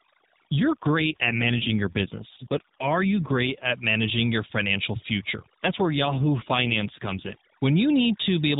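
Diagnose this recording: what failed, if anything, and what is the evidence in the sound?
Overdone noise removal in the call processing stage is present for the whole clip. Between phrases the background drops to near silence, broken by twinkling specks. The suppressor has been pushed so hard that it gates individual frequency bands whenever they sit near its noise estimate, taking the quieter parts of the speech with them. Those isolated specks in the pauses set it apart from the swirling warble of a starved codec.

An AMR rate drop on the network-driven codec side happens twice, from 0.60 to 3.71 s and from 5.64 to 7.37 s. In both spans the speech turns rougher, buzzier and more synthetic, then recovers. The change fits the codec stepping down from its 12.2 kbps mode, which sounds only lightly coloured here, to about 5.9 kbps and spending the freed bits on error protection. The bandwidth stays the same and nothing drops out, which rules out a codec switch or packet loss.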